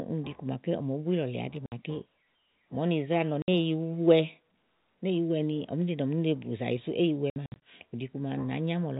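Packets went missing and the receiver inserted silence, producing packet loss filled with silence: 60 ms holes at 1.66 and 3.42 s, then scattered gaps between 7.3 and 7.56 s. The lengths fit 20 ms packets in the telephone-band stream.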